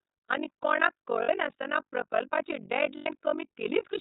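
From the start, the whole clip runs through the iLBC codec, and the damage is easy to hear: speech is band-limited to below 4 kHz, with a rough, slightly synthetic edge from coding each frame's excitation on its own. It sounds like the 13.33 kbps mode with 30 ms frames.

On top of that there's overlap-add ripple all the way through. The frames were stitched back together with windows that don't sum to a flat gain, so the level dips by about 60 dB once per frame. That gives a harsh, robotic flutter at around 50 Hz.

Lost iLBC frames show up twice, at 1.23 to 1.29 s (60 ms) and at 2.97 to 3.09 s (90 ms). In each gap the decoder repeats the last pitch cycle mixed with noise, giving a brief held, buzzy vowel. Speech snaps back almost immediately after each one.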